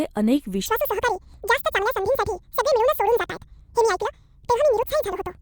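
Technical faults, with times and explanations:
0.66 to 5.42 s: audio read two samples at a time (double speed). Each sample pair is taken as one frame, so the speech plays twice as fast and an octave (12 semitones) higher. Unlike time-compression, pitch rises with tempo.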